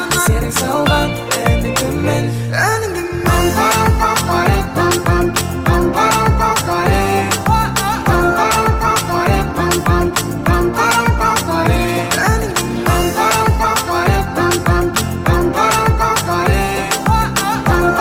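No technical faults can be heard anywhere in the audio, and the signal holds steady and continuous throughout.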